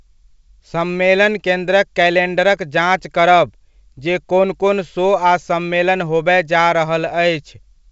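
No faults can be heard anywhere in this speech.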